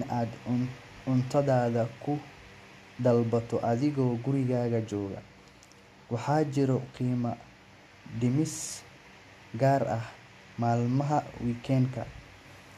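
No technical faults are audible.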